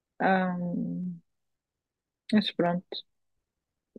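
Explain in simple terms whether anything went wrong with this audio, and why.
Two sharp clicks cut into the speech, at 1.04 s and 2.66 s. These are most likely dropped samples. A handful of tiny slices of the recording went missing. The sound wave then jumps abruptly to a later point, and that jump clicks.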